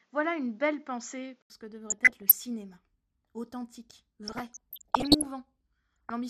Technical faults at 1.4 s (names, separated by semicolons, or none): MP2 compression; input switched to a poorer device